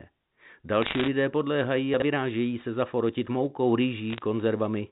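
Bit errors on a digital phone line corrupt this speech twice. Flipped bits in the G.711 mu-law stream each knock one sample off its true value, and where the sign or upper bits are hit the result is a sharp tick. From 0.82 to 1.08 s the error rate is high, on the order of one or two percent, so the ticks pile into a crackle laid over speech that is itself intact. A lighter burst, under one percent, follows "se zaforotit moukou" from 4.10 to 4.22 s and gives sparser ticking. Between these, chunks out of order disturb the audio from 1.94 to 2.02 s, just before "se zaforotit moukou". A 20 ms chunk arrived or was written three chunks late, about 60 ms behind, and plays after material that should have come after it. Nothing is missing, but the reshuffled segments meet at three hard joins, heard as a brief jumbled stumble. The telephone band itself, cut off at 4 kHz, sounds as expected for the codec.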